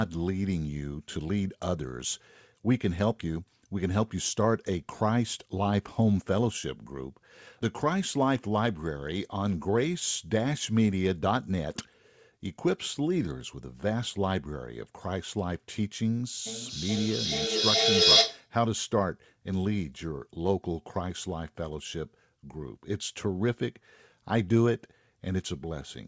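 Feedback echo between two devices appears in this speech clip from 16.46 to 18.51 s. One device replays the other's microphone, which picks the sound up again, so it returns roughly every 0.4 s, growing to about 7 dB above the speech rather than dying away.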